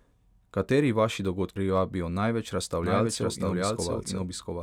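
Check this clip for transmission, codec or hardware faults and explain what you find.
Two faults are audible in this speech clip.

At 1.56 s, compressed frames are skipped. Whole coded frames never reach the output, so the speech jumps ahead by roughly a fifth of a second.

From 2.84 s to the end, there is a doubled audio track. A second full-band copy runs about 700 ms behind, at roughly equal loudness. It is dry, with no decay or room sound, and cuts in abruptly. A slower second capture path is the likely cause.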